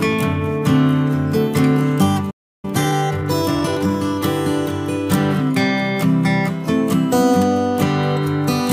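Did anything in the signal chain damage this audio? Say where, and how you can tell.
Yes. At 2.30 s the sound cuts out mid-flow and stays silent until 2.65 s, a gap of roughly a third of a second, before resuming. That is a playback stall at the playback stage. The output path simply had nothing to send, most likely because the player's buffer ran dry or its audio thread was held up, so the device emitted silence until data arrived again.

From 2.65 s to 3.95 s the audio runs hurried, about 1.25 times normal speed, yet its pitch stays where it was. This is time-compressed catch-up, also at the playback stage. Having fallen behind during the stall, the player trims its backlog by dropping short slices and cross-fading the joins, which shortens the audio without transposing it.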